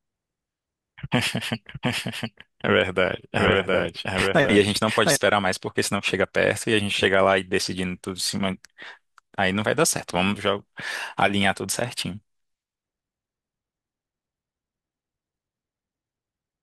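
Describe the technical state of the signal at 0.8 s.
At 0.8 s a doubled audio track is present, running from the start to 5.16 s. A copy trails about 0.7 s behind, roughly 5 dB quieter, likely from a slower second capture path.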